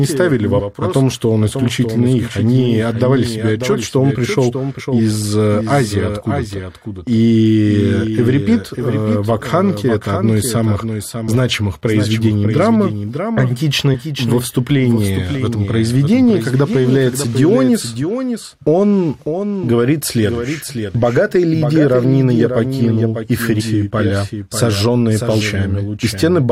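A second copy of the speech, likely picked up again through a slower capture path, is mixed in throughout and runs about 0.7 s behind at roughly 5 dB below the original. This doubled audio track sounds like a dry, full-band repeat with no decay or room colour.

Damaged data in a compressed stream makes the decoder misread frames, lose sync and hunt for the next header. The result is a short chirp or blip, often with a skip ahead. It happens at 0.58–0.60 s; at 4.79–4.81 s, after "отчет что он пришел" and before "из э"; at 13.93–13.96 s, just before "во вступлении в этом"; at 23.59–23.62 s, after "равнины я покинул и"; and at 25.40 s.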